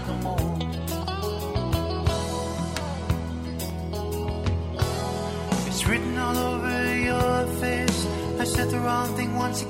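At about 3.70 s there's a block of digital silence, just 0.73 ms long. That's short enough that it comes across as a single tick, not a hole. The output drops straight to zero and jumps back with no fade. That fits a 32-sample buffer not being filled in time.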